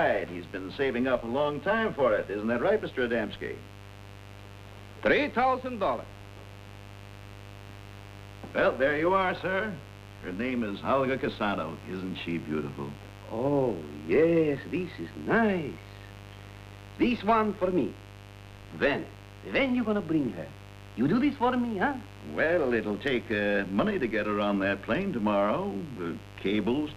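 From start to end, a mains buzz runs under the audio. Somewhere in the chain, a dimmer, a rectifier or a missing shield let sharp switching spikes from the 50 Hz supply leak in, twice per cycle. Those spikes carry a dense series of 50 Hz harmonics reaching up to several kHz, which is why the result is a steady, raspy buzz rather than a smooth hum. It sits around 20 dB below the wanted signal throughout.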